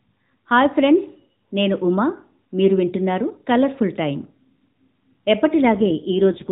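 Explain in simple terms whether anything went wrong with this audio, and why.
Near the end, from 5.59 s to 6.52 s, the voice turns rougher, buzzier and more robotic, though it never drops out. That's an AMR rate drop. The call already has the muffled phone sound of the AMR narrowband mobile codec. Here the mobile network, likely facing a weak radio signal, told that codec to describe the voice with far fewer bits and use the spare capacity to protect against errors, so the voice is rebuilt more crudely until the clip ends.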